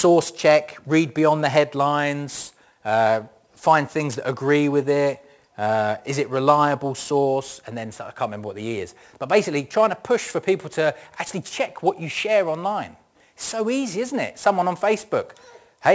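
Aliasing runs through the whole speech clip. The audio appears to have been resampled down, consistent with a conversion from 44.1 kHz to 16 kHz, without a proper anti-aliasing low-pass first. Content above the 8 kHz fold point reflects back down as spurious, inharmonic tones roughly 20 dB below the signal. Sibilants come out gritty and metallic rather than airy, and the spectrum stays dense right up to the 8 kHz band edge instead of rolling off.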